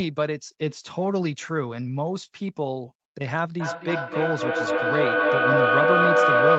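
Feedback echo between two devices begins at 3.6 s and runs to the end at 6.58 s: one device's microphone picks up the other device's playback and sends it back round. Each phrase returns roughly every third of a second, and the repeats build to about 6 dB above the speech instead of fading.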